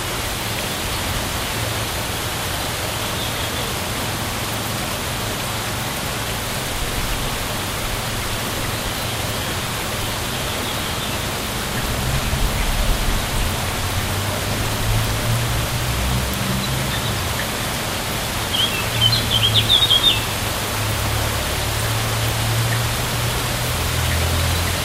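Sounds, with no technical faults heard anywhere in the recording.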